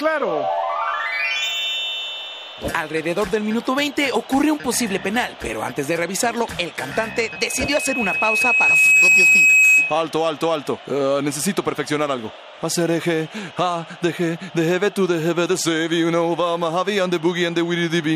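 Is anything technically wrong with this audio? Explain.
Yes. From 6.92 s to 10.06 s there is loudspeaker feedback squeal: a microphone is hearing the loudspeaker it drives, and at 2.6 kHz the loop gain passes unity. That tone swells over roughly two seconds into a piercing squeal about 10 dB above the programme.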